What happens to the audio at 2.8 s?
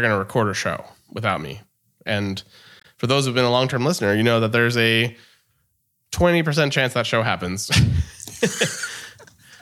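From 2.80 to 2.85 s, damaged data in the compressed stream makes the decoder misread frames and lose sync, giving a brief chirp, squawk, click or short hole.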